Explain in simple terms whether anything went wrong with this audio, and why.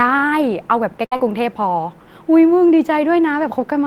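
Two related faults cluster in a quarter of a second of this speech. The first is a burst of packet loss, starting around 1.05 s and settling by about 1.28 s. About 60 ms of the call never arrived. The receiver covered the hole by extending the last sound for about 60 ms, which comes across as a held, fading smear, and then jumped ahead.

Inside that stretch there are two cases of short concealed packet loss, at about 1.13 to 1.17 s and 1.17 to 1.20 s. Each lost about 20 ms, patched with brief guessed sound (about 12 ms and 20 ms). These are tiny blips, a quick wobble or smear rather than a sustained fade. That brevity is what separates them from the burst. Together they make the passage sound briefly blurred.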